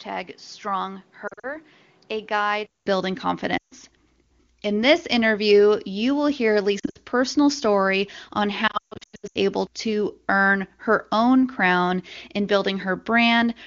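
Input switched to a poorer device, from the start to 2.86 s. The sound is dull and band-limited, with nothing above 6.2 kHz, noticeably quieter, and carries its own noise floor well under the signal. At 2.86 s a gap of about 200 ms of silence is followed by a clearer, fuller sound. The likely cause is the system taking input from a lesser microphone or headset profile before switching back.

Lost AMR speech frames occur at 1.27–1.58 s, 3.58–3.74 s, 6.79–6.98 s and 8.67–9.37 s. Radio errors corrupted frames, so the decoder repeated its last good pitch and vocal tract settings at falling gain. The first and third events scatter about 120 ms of loss over 160 ms, in runs of up to 40 and 60 ms. They sound like brief dips and warbles. The second is one 140 ms run that drops to near silence. The fourth loses 500 ms over 680 ms, with a 140 ms run that fades almost to silence, and the sound returns briefly weak and rough each time, against the otherwise clean wideband coding.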